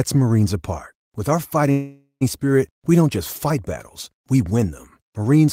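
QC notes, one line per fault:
1.71–2.23 s, call audio freeze: the last sound smears into a fading buzz, ending in about 110 ms of silence, then resumes with nothing lost, most likely from delayed packets draining the jitter buffer. On a spectrogram: flat horizontal streaks decaying to a blank gap.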